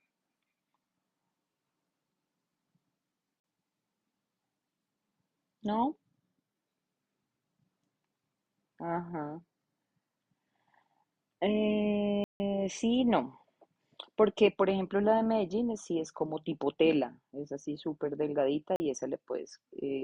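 At 3.40 s the speech drops out for 40 ms, at 12.24 s for a longer 160 ms, and at 18.76 s for another 40 ms. Each is a block of digital silence: a stretch of samples zeroed outright, with no fade in or out. The two 40 ms gaps read as brief holes, while the 160 ms one at 12.24 s opens into a proper little hole in the speech.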